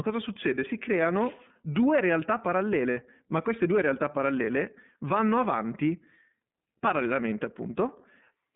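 Throughout, the iLBC codec confines the speech to a 150 Hz to 3.6 kHz telephone band, sounding plainly rough and synthetic. A spectrogram shows a hard ceiling, which fits narrowband iLBC, here running at 13.33 kbps.

At 2.91 s, between "creano due realtà" and "ma queste due realtà", lost iLBC frames leave a buzzy held tone lasting about 60 ms, consistent with two missing 30 ms frames. The waveform shows repeated pitch cycles, and the voice returns immediately.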